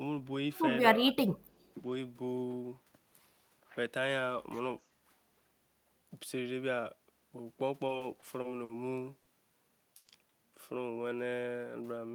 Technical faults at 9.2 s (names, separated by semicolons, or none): short stall from a late packet